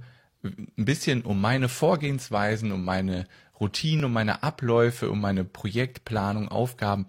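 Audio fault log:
4.00–4.04 s, overlap between stream segments: at the 4 s boundary between 2-second segments, about 38 ms of speech is trimmed as supposed duplicate, so a tiny skip lands just before "um meine"; the waveform shows a sudden discontinuity, the spectrogram a thin vertical broadband line.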